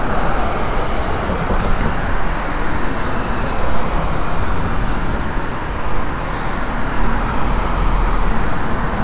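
Everyday sounds, with no technical faults audible anywhere.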